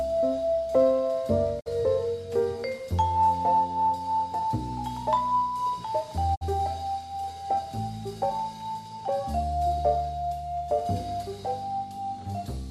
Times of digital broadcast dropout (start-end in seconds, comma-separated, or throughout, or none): 1.59-1.68, 6.34-6.43